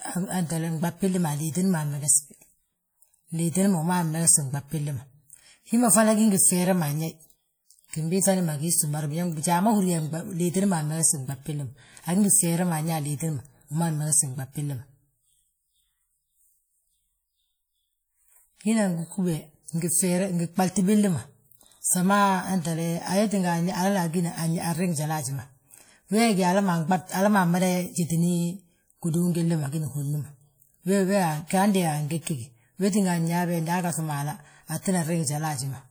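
From the start, the speech carries a ringing, washy texture. A hiss rises and falls with the signal. The likely cause is WMA compression at a low bitrate, which fits something near 48 kbps. This transform codec works in long blocks. Its quantisation noise smears across tens of milliseconds, and weak spectral detail drops out. The damage is plainly audible. Content runs up to about 20.1 kHz, so the top end is not cut.

At 31.47 s, a short hiss appears just before a sharp onset. This is pre-echo. It spans about 35 ms. The attack fell late in a coding block. Noise scaled for the loud part spilled into the quiet gap before it. The onset sounds softened. At 32.21 s it happens again, spreading over about 51 ms.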